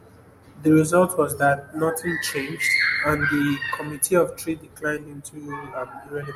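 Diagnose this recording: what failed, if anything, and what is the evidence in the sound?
Nothing failed; no audible fault anywhere in this speech.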